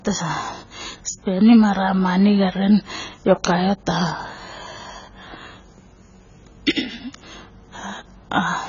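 From start to finish the speech sounds dull and watery, with a warbling, fizzy edge on sibilants, most likely AAC compression at a very low bitrate, around 16 kbps. A spectrogram shows nothing above 7 kHz and patchy, holed upper bands.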